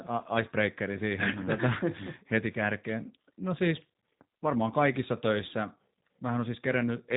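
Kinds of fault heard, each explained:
G.729 codec: the speech is rebuilt from a vocal tract filter, a pitch predictor and sparse pulses per frame, giving a plainly rough, synthetic edge consistent with 8 kbit/s G.729 coding. A spectrogram shows a hard ceiling at 3.8 kHz, empty above it.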